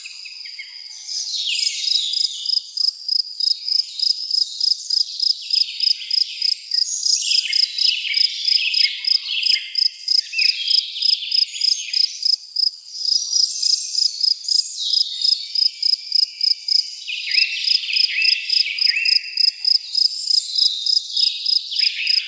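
Nothing stood out on listening; the sound has come through a call path whose content stops around 8 kHz, which fits a wideband codec such as G.722 at 64 kbps.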